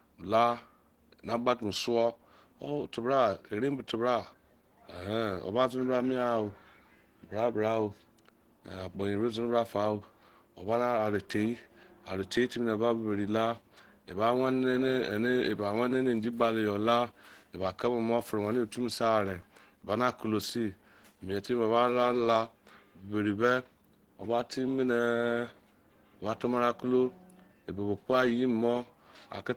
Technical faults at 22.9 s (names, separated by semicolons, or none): Opus compression